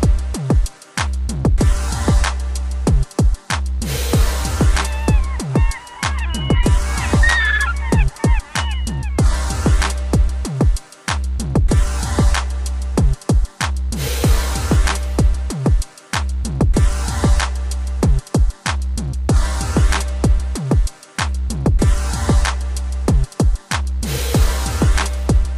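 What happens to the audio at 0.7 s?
Nothing goes wrong at 0.7 s; the audio there plays through intact, with no dropout, click or distortion.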